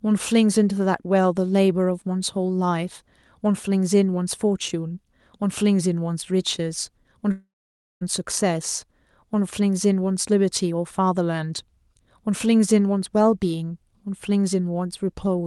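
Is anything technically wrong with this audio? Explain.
Yes, there's a long network dropout from about 7.31 to 8.03 s. About 0.7 s of audio never arrives, likely because packets went missing on the network. The receiver papers over the gap by stretching the last bit of sound into a buzzy smear that fades out, and about half a second of that stretch ends up as plain silence. When the audio picks up again, the lost chunk is simply gone. The call codec's band limit tops out around 12 kHz.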